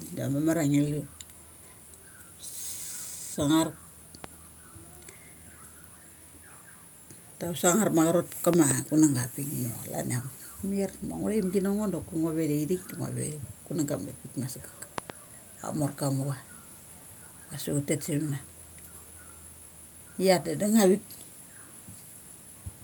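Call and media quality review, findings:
Loud pop, 4.24–4.26 s. Single sharp pop over the speech, roughly 10 dB above it. Speech continues underneath. Likely a voltage step from a plug, switch or static discharge.

Loud pop, 8.54–8.73 s. Two pops in quick succession, roughly 20 dB above the speech. Likely a repeated electrical transient, shaped by downstream circuits.

Loud pop, 14.98–15.12 s, right after "kunang ga ma saggrk". Double pop, roughly 20 dB above the speech. Likely a driver glitch injecting a pulse.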